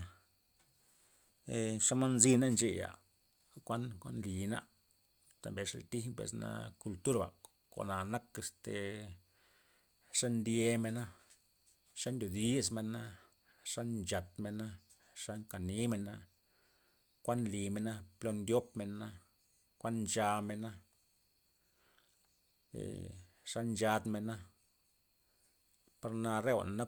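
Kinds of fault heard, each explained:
No faults can be heard anywhere in this recording.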